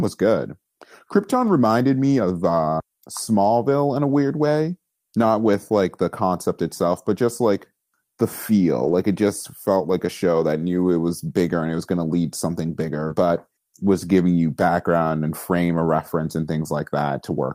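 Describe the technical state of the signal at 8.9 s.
Around 8.83 to 8.93 s the speech turns briefly rougher and noisier without any gap: a lost packet rebuilt from error correction, decoded from low-bitrate copies carried in the following packets.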